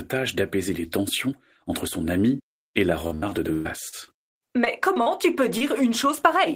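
A French speech clip carrying repeated packet loss, heard as robotic sound, from 3.07 to 5.08 s, starting after "son ami et la" and clearing before "tu peux". Over that stretch ten separate holes open in the stream, the longest about 120 ms. Each is patched by stretching the preceding sound, so about a fifth of the span is synthetic fill. The result is choppy. On a spectrogram the harmonics freeze into flat, smeared bands at each patch. The waveform shows repeated, overly regular cycles between the real segments. Just after "tu peux", from 5.58 to 5.62 s, a short concealed packet loss fills about 20 ms of missing audio with extrapolated sound and then blends back into the real signal. It is heard as a brief smear or wobble. The spectrogram shows a thin vertical blur, and the waveform a short stretch of copied, slightly mismatched cycles.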